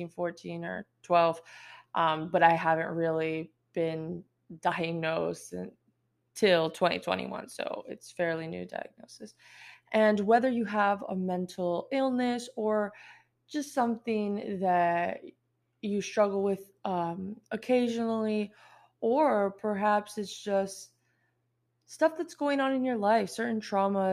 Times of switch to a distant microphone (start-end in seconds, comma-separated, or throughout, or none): none